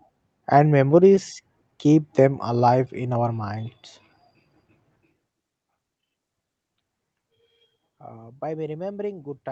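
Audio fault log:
1.15–1.19 s, short concealed packet loss: a brief smear just before "keep them alive in", where a 20 ms gap was covered by extending the preceding sound.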